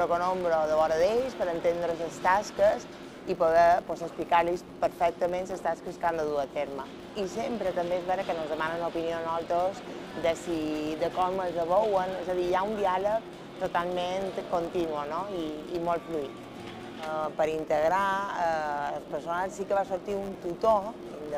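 Throughout the clip runs a 100 Hz buzz from a filter restarted on every block: the filter loses its state and starts each 10 ms block from zero, leaving a small transient at every boundary. Unlike mains hum, this buzz rises and falls with the sound's level.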